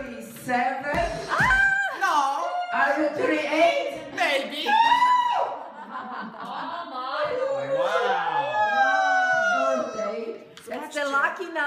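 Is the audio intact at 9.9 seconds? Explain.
Yes, the audio is intact at 9.9 seconds, with no dropout, click, distortion or other fault at that moment.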